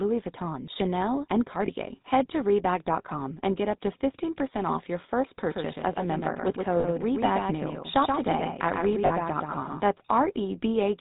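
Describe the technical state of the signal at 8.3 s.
At 8.3 s you're inside a doubled audio track running from 5.51 to 9.81 s: a second full-band copy trails roughly 150 ms behind, around 5 dB down, with no decay or room colour, most likely from a slower capture path picking the signal up again. Under that sits the GSM full-rate codec damage present across the whole clip. The speech is band-limited below 4 kHz with that buzzy, gravelly pulse-excited roughness, consistent with GSM's 13 kbps.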